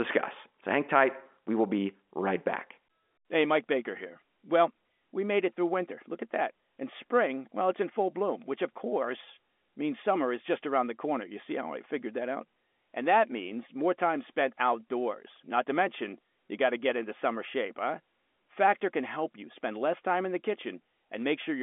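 No technical faults can be heard anywhere in this speech recording. It is carried over G.711 A-law telephone coding at 64 kbps, which confines the sound to a line band of roughly 250 Hz to 3.5 kHz with nothing above 3.7 kHz, and any coding noise is faint at most.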